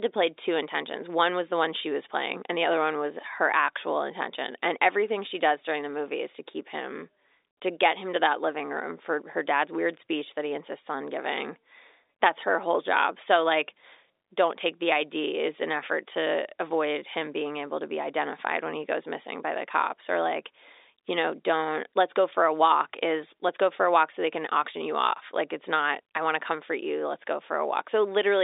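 No faults: the speech sits on an ordinary G.711 mu-law telephone path at 64 kbps, with the line band running from 300 Hz to 3.7 kHz and nothing above 3.8 kHz, as that format requires.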